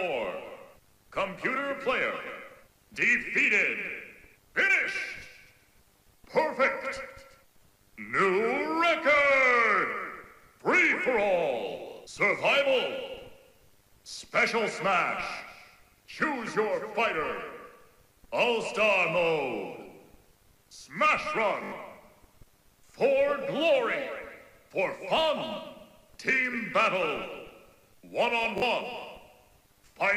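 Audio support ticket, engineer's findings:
Repeated buffer, three spots: 15.38 s (one extra play), 21.64–21.72 s (four extra plays), 28.58–28.62 s (two). Output device is starved and replaying its last 20 ms chunk, so you get short stutters with hard joins. Roughly a few tens of ms of audio lost each time.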